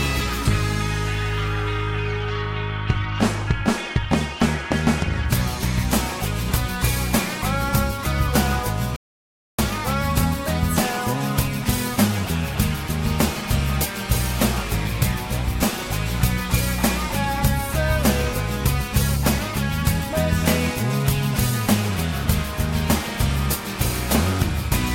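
At 8.96 s the sound cuts out mid-flow into dead digital silence until 9.58 s, an audio dropout to silence of about 0.62 s, likely from the input briefly disconnecting or muting while zeros were written. The waveform shows a flat line, the spectrogram a fully blank column without room tone.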